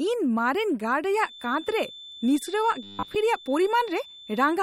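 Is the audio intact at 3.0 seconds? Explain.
No. The encoding likely ran short of bits, which fits an MP3 at around 48 kbps: the encoder discarded everything above 15.9 kHz and let weak frequency lines drop in and out from frame to frame. That MP3 compression damage is plainly audible for the whole clip, including at 3.0 s, as a watery, swirly texture with metallic chirps on s sounds and smeared attacks.

A feedback whistle is also present at that moment, running from 1.14 s to the end. The loop from loudspeaker to microphone is likely sitting just at the edge of feedback, so a single 3.5 kHz tone keeps ringing without running away. It sits about 20 dB below the speech as a thin, steady whistle that swells and fades slowly in level.

From 2.83 to 3.16 s there is robotic sound from repeated short buffers. New audio likely arrived too seldom, so the software filled the gaps by replaying the last stretch it had, and most of the real audio in that span was skipped. 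The repeats impose a fixed 100 Hz pitch, which fits a 10 ms buffer. The speech turns into a rigid, metallic buzz that only loosely follows its shape.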